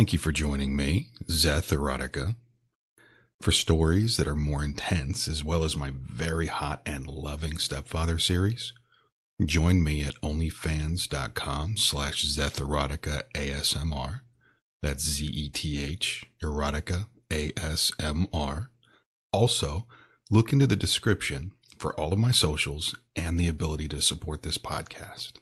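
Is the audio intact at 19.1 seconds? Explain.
No. At 19.1 s you're in the middle of a stretch of repeated timing corrections that runs from about 0.15 s to 24.31 s. The receiver keeps trimming small slices out of the stream to keep pace with incoming audio that's arriving about 5% too fast, so it plays at an effective 105% speed. Each cut is tiny, and around that point they come through, if at all, as slight hiccups or an uneven tempo.

The root cause is clock drift between sender and receiver, which runs through the whole clip. The sender's clock is running roughly five percent faster than the receiver's, so the jitter buffer keeps filling. The receiver has to keep discarding bits of speech, all in the same direction, at irregular intervals. The speech itself comes through the call codec with its upper band stopping around 12 kHz.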